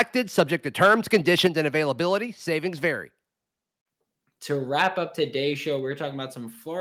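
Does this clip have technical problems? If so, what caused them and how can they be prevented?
Yes. The harsh, crackling edge on the loudest moments is microphone overload. It appears at the very start (0.0 s), at 0.38–0.41 s, and through 0.82–1.47 s, just before "and availability". The peaks push roughly 10, 6 and 5 dB past the converter's ceiling, and their tops are flattened into a buzzy grit. Unlike a level change, the loudness barely moves; the sound is distorted. The likely cause is an input gain set too high. Set the microphone gain so the loudest passages peak well below full scale.

The second fault is a microphone volume step-down, heard as sudden drops in level right after the distorted peaks. The first is about 2 dB at 0.40 s, and the second is about 6 dB at 1.47 s, just before "and availability". The drop affects the voice and the background noise together, and there is no added distortion, which separates it from the overload. 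This was likely the call software's automatic gain control reacting to the clipping and lowering the device volume in one step. Setting a correct input level beforehand, or disabling automatic microphone adjustment, prevents these jumps.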